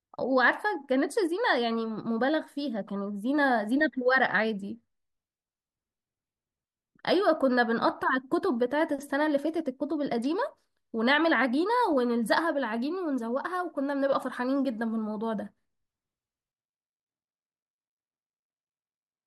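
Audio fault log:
16.52 s to end, switch to a distant microphone: at 16.52 s the speech abruptly turns roomy and hollow, losing low-end body, and stays that way to the end of the clip. Level falls by about 5 dB and room noise rises to sit about 25 dB below the speech. The likely cause is that the close microphone's feed dropped out and the recording fell back to a pickup further from the talker, hearing more room reflection and less direct sound.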